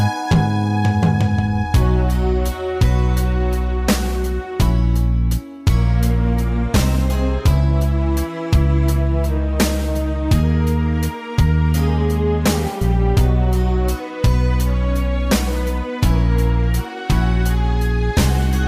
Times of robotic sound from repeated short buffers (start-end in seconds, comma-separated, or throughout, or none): none